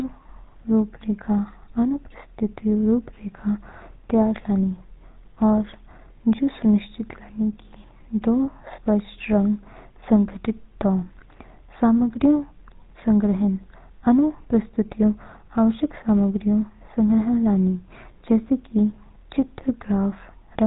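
From start to end the speech has a buzzy, gravelly roughness and nothing above 3.8 kHz, the mark of the GSM full-rate codec, consistent with 13 kbps.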